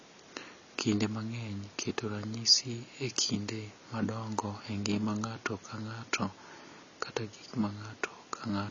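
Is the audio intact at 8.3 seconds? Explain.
No, at 8.3 s you're hearing the same damage that runs through the whole clip: likely AAC compression. Nothing gets through above 7 kHz, so the speech sounds dull and smeared with a warbly, fizzy edge, which fits an encoder squeezed to around 24 kbps.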